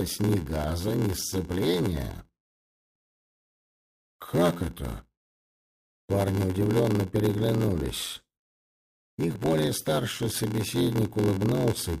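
Throughout the audio there is a steady buzz at about 86.1 Hz, and everything runs slow at 0.861 times normal speed while keeping roughly its original pitch. This is a block size mismatch (padded). Each short block written upstream is topped up with zeros to fill a larger read, which fits a 512-sample buffer. The resulting silent gap in every block causes both the buzz and the slowdown. A sample-rate mismatch would instead shift pitch along with speed and leave no buzz.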